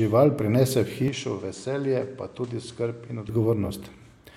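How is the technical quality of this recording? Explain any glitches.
The recording has one fault in the middle of the speech. From 1.08 s to 3.29 s the sound turns duller and quieter, which points to an input switched to a poorer device, likely a second microphone or a headset taking over. Nothing above 10.1 kHz passes during that stretch, the level drops about 5 dB, and a new noise floor sits about 30 dB below the speech. The change happens instantly, with no gap, and full bandwidth returns at 3.29 s.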